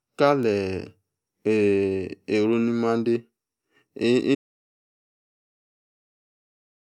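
An audio dropout to silence begins at 4.35 s and runs to the end: the speech cuts off mid-flow into silence with no room tone, likely a lost input link.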